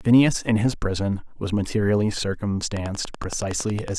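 From 2.77 to 3.89 s a train of clicks, roughly fifteen, ticks over the speech at a steady 10.7 per second, peaking around 10 dB above it, likely from interference by nearby equipment. A spectrogram shows evenly spaced thin vertical broadband lines; the waveform, sharp repeated spikes.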